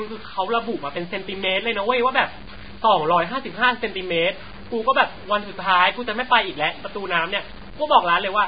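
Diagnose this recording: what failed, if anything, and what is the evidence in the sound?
Low bit depth without dither, likely from sample-format conversion, runs throughout. Grainy distortion tracks the speech, about 20 dB down, fitting 7-bit truncation.

Heavy Vorbis compression, likely at the codec stage, is present throughout. The spectrogram shows nothing above 4.9 kHz and smeared, blocky treble, fitting a bitrate near 16 kbps, with hissy, blurred consonants.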